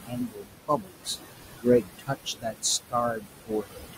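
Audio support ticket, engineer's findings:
Noise suppressor artifacts throughout. Background pulled down about 19 dB between phrases, rising again under speech. Room noise sits only about 6 dB under speech, so gating works hard.

Speech cut by the noise suppressor at 0.03–1.18 s, 1.56–2.64 s, 3.12–3.95 s. Quiet parts drop about 22, 21, 21 dB, sounding swallowed. Roughly 0.7 s, half a second, half a second affected.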